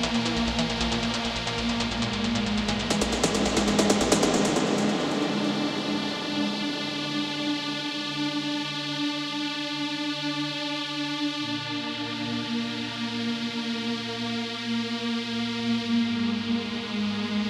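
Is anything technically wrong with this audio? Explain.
No technical faults are present.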